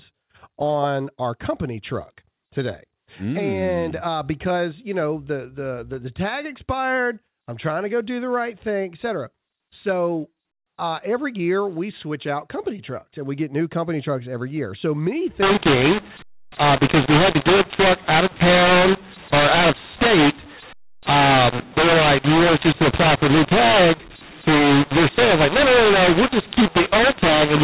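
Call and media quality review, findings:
mu-law and A-law mixed up, 15.43 s to end. Harsh, distorted speech, scrambled levels, noise-filled pauses. A-law samples decoded with mu-law curve. Earlier G.711 section band-limited below 4 kHz.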